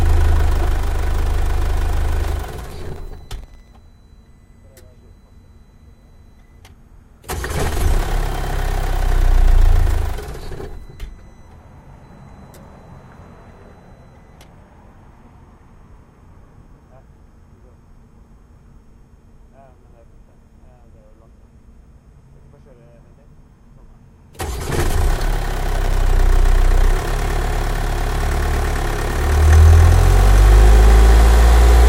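From 2.58 to 3.68 s, and again from 25.54 to 25.93 s, there's processor overload crackle: the processor keeps missing its deadlines on tiny buffers, about 0.7 ms each, and repeats scraps of old audio with hard edges, giving a gritty tearing over the sounds.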